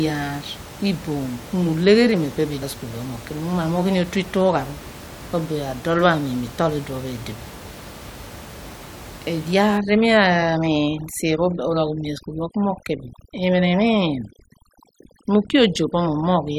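From 9.78 s to the end, overdone noise removal kicks in: bands near the noise estimate get gated off, so the background drops and breaks up into twinkling specks.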